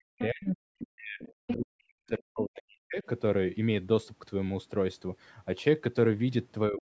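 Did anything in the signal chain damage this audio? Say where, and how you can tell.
Yes. The damage is in the call processing, where the echo canceller was likely confused by both sides talking at once, and it shows up as speech suppressed in double talk. The talker's level collapses, at its deepest by roughly 40 dB, from 0.00 to 0.59 s, from 0.80 to 1.21 s, from 1.40 to 2.98 s, and again from 6.69 s to the end. The voice sinks or breaks up because the suppressor cannot tell near speech from loudspeaker echo and ducks both.

The same stage also lets the other side's voice leak through. Brief scraps of a second, fainter voice, roughly 10 to 20 dB below the talker, sit at 0.79 to 0.86 s, 1.21 to 1.33 s and 1.49 to 1.53 s. They cluster inside and between the suppressed stretches. Residual far-end sound from the speaker likely reached the microphone and passed through as short fragments rather than being subtracted out.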